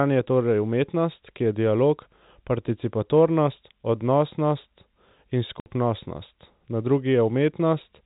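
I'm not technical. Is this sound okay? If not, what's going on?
No, not quite. At about 5.6 s, right after "dialog participatornost odnosnost in", the sound drops out for 60 ms. That's packet loss filled with silence: a few chunks of audio went missing and were replaced with nothing, which fits three 20 ms packets, so you hear a brief hole.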